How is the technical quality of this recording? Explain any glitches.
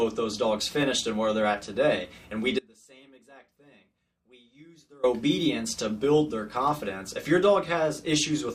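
The recording has one clear glitch. An audio dropout to a faint residue runs from 2.59 to 5.03 s: the signal abruptly sinks to a faint leak roughly 30 dB down for about 2.4 s, likely a momentary break upstream while the downstream path stayed live.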